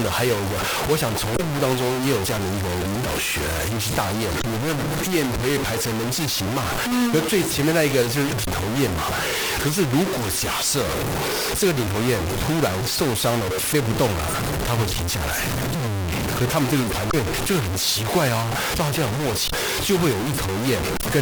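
Low bit depth without dither runs through the entire speech clip. The grainy, harsh distortion tracks the speech, with the error nearly as loud as the signal itself. It is likely the result of truncating the samples to very few levels, consistent with about 3 bits, without dither. Because the error follows the waveform, quiet passages turn gritty and the softest parts sputter between steps or collapse to silence.

Damaged data in a compressed stream appears as five short blips at 1.33–1.40 s, 4.38–4.44 s, 8.41–8.47 s, 17.08–17.14 s and 19.45–19.53 s, each lasting roughly 60 to 70 ms. Corrupted bytes in the encoded stream make the decoder misread those frames and lose sync until it finds the next valid frame header. Each event is a brief chirp, squawk, click or short hole that breaks into the speech.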